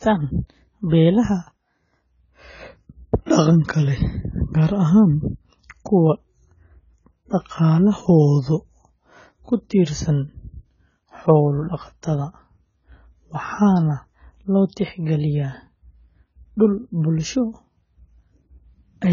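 From start to finish the speech sounds dull and smeared. Nothing is heard above 7 kHz. Sibilants turn fizzy and sustained sounds warble. This points to heavy AAC compression, likely AAC-LC at a very low bitrate around 16 kbps, discarding detail and high frequencies.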